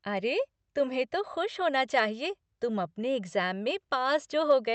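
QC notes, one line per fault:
Nothing to flag in this speech clip.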